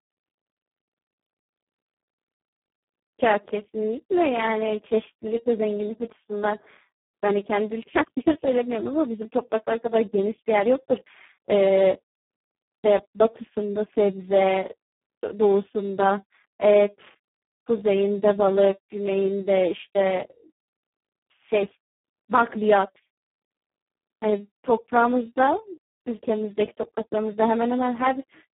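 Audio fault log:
throughout: Speex codec. The speech was squeezed through a CELP coder at a low setting, with too few bits to describe the excitation properly, which fits a bitrate of around 4 kbps. The speech comes out heavily damaged: hoarse and noisy. The path also carries only a telephone band of 150 Hz to 3.4 kHz, and nothing at all sounds above 3.8 kHz, leaving it thin and muffled.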